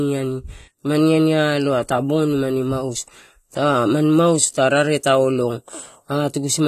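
From start to finish, the speech carries plainly audible codec damage, most likely AAC compression, the AAC-LC kind. Nothing reaches above 13.5 kHz, so the top end sounds shaved off and dull. The coder is quantising its frequency lines hard enough that the detail smears, leaving a warbly, fizzy edge on sibilants and held sounds. That combination fits a bitrate of around 32 kbps.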